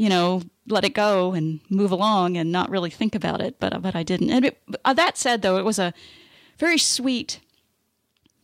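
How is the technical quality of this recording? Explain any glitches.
The technical quality of this recording is good, and there are no glitches to explain.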